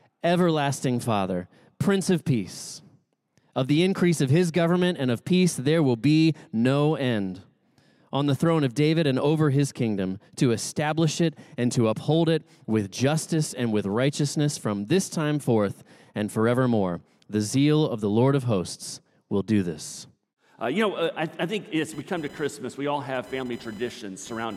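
A load change in the computer, from the processor, graphics card or mouse activity, disturbs the shared ground of the audio circuit at 21.93 s, causing computer activity noise: a buzzy chirping at around 1 kHz, roughly 30 dB below the signal, that continues to the end at 24.57 s.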